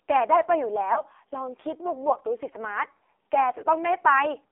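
Throughout, the speech sounds thin, buzzy and distinctly synthetic, confined to roughly 300 Hz to 3.6 kHz with nothing above that. This is the AMR narrowband mobile codec at a very low rate, consistent with its 5.9 kbps mode. At so few bits the decoder rebuilds each frame from a coarse vocal-tract model and a handful of excitation pulses, so the damage is heavy and the voice loses its natural texture.

From 0.94 to 1.02 s there is a brief dip and warble, and at 2.98 s a second, shorter one. These are lost AMR speech frames: each fits a single 20 ms frame that failed its check. The decoder filled the gap by repeating the last good pitch and vocal-tract settings at reduced gain, so the sound smears for an instant before the speech resumes slightly rough.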